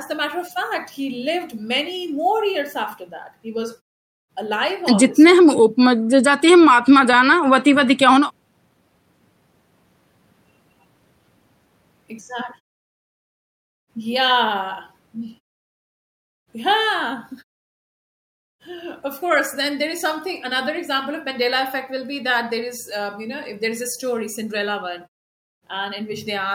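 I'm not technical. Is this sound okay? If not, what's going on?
Yes, this sound is okay, and nothing is going wrong in it.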